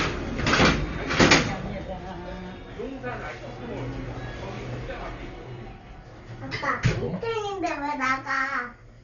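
From start to end, the sound is dull and boxed in. Nothing reaches above 7 kHz. Steady tones carry a rough, fluttering haze of noise. The damage is heavy throughout. This is likely Dolby Digital compression at a very low bitrate, one that points to around 40 kbps. Starved of bits, the encoder cuts the top of the band. Many frequency lines get no detail at all. The decoder fills those gaps with noise.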